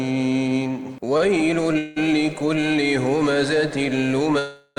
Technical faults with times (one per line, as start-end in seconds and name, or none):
1.17-1.22 short stall from a late packet
1.78-1.98 call audio freeze
4.39-4.78 call audio freeze